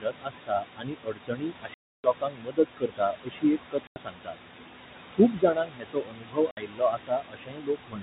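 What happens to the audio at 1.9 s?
The sound drops out completely from 1.74 to 2.04 s. This is packet loss filled with silence. A 300 ms stretch never reached the receiver, and it played dead silence in its place. That length fits ten lost 30 ms packets. The hole is total, with no room noise, and it starts and stops abruptly.

The dropout falls inside a longer problem: speech cut by the noise suppressor, from 0.0 to 4.37 s. The suppressor mistook parts of the speech for noise and pulled them down with the background, by as much as about 22 dB. About three seconds in that span are affected. The affected parts sound swallowed or faint.

Noise suppressor artifacts run through the whole clip, this moment included. The suppressor lowers the bands it judges to be steady noise, here by about 21 dB. Between the speech the room noise sinks away, then rises again underneath it.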